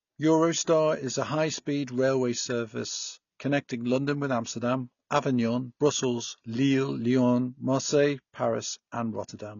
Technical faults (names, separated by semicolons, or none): AAC compression; pre-echo